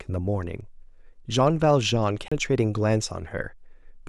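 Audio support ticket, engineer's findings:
CD skip, 2.28 to 2.32 s in the speech. Brief dropout of about 30 ms; playback resumes at a different point. Probable component: disc transport/laser pickup. Mechanism: shock or disc flaw knocked tracking onto another turn of the spiral; player muted during relock.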